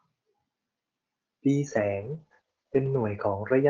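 From 1.68 s to the end of the clip at 3.69 s, a call bitrate drop takes hold: the encoder falls from 64 to 10 kbps, holding the lowest rate for 1.14 s, and audio bandwidth narrows from 20 kHz to 8 kHz. The speech turns coarse, watery and muffled, without recovering.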